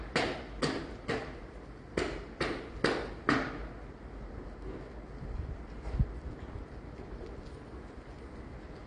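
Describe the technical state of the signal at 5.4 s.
At 5.4 s the audio carries AAC compression damage that runs through the whole clip. The likely cause is AAC-LC coding at a bitrate that fits about 32 kbps. Starved of bits, the encoder quantises coarsely and discards everything above 9.9 kHz, leaving the sound plainly dull and smeared.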